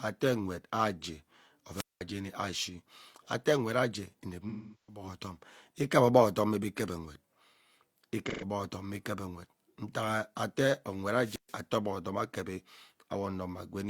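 At 1.74 to 2.01 s and again at 11.13 to 11.60 s, a wireless microphone squelch dropout occurs: the radio signal weakens until the receiver mutes, so hiss rises, the speech drops to near silence for about 200 ms and then 130 ms, and returns. Between them, AAC frame loss with concealment: at 4.49 to 5.03 s, about 384 ms of lost audio is filled from the last good spectrum and smears, then fades out and back; at 8.26 to 8.44 s, a 128 ms gap leaves a brief noisy, phasey patch.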